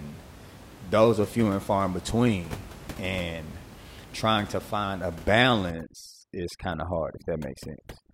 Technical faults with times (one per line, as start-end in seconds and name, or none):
5.71-8.13 overdone noise removal